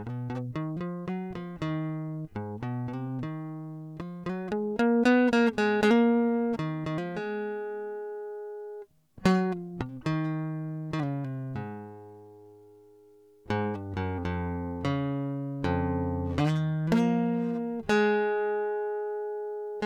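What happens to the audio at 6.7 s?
Nothing goes wrong at 6.7 s: the music plays through that moment intact, with no dropout, click or other fault.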